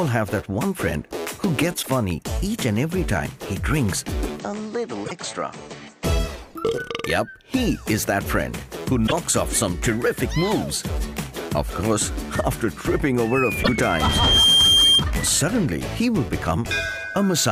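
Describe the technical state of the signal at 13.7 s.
Damaged data in the compressed stream runs from 13.60 to 13.69 s. The decoder misreads the corrupted frames and loses sync until it finds the next valid frame header, producing a brief chirp, squawk, click or short hole. A plain dropout would instead fall silent.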